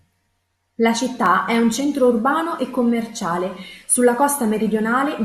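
At 1.26 s there is a single sharp click, visible as a thin vertical line across the spectrum. This is likely dropped samples: a fraction of a millisecond of the stream goes missing, so the waveform jumps abruptly without removing any audible speech.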